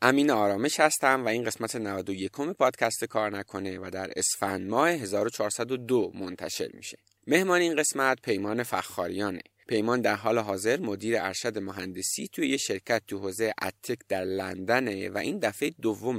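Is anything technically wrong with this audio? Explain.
No, the signal shows no technical faults anywhere in the recording.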